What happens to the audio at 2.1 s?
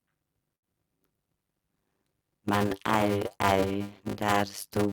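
At 2.1 s the speech carries a block size mismatch (padded), present across the whole clip: each block is only partly filled, which fits 256-sample writes, and the remainder is zero-padded. The inserted gaps produce a 100 Hz buzz and stretch playback to 0.533 times normal speed, with pitch roughly unchanged.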